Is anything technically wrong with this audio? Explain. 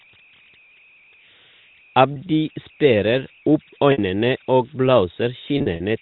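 Yes, there are two problems.

Converter idle tones run through the whole clip. An undithered delta-sigma converter, given very small input, falls into repeating bit patterns that produce a tone, here around 3 kHz at about 28 dB below the signal. It comes through as a whistle in pauses and a grainy layer under quieter speech.

Packet loss with pitch repetition occurs at 2.14 to 2.16 s, 3.92 to 3.98 s, and 5.58 to 5.80 s. At each dropout the receiver repeated the last pitch period and faded it out over about 50 ms. The 20 ms gap sounds like a briefly held, buzzy note. The 60 ms gap outlasts the fade, dipping toward silence before speech cross-fades back. The last stretch loses 100 ms scattered across 220 ms, in runs of up to 40 ms, giving a string of short buzzy stutters.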